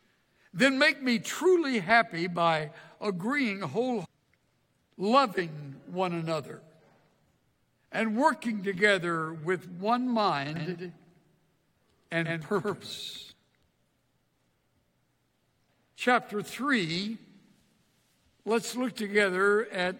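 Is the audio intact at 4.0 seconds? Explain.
No. Between 4.04 and 4.06 s the sound jumps abruptly ahead with a brief blip, likely a stream segment skipped, where one chunk failed to load and playback moved on to the next. Unlike a dropout, there's no gap of silence; the material simply continues from later on.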